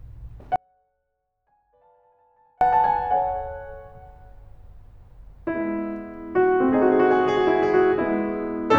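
At 0.56 s the music abruptly cuts out until 2.61 s, an audio dropout to a faint residue lasting about 2.05 s. Only a faint leak of the music remains, roughly 40 dB down, likely from the signal path losing its feed while staying live downstream.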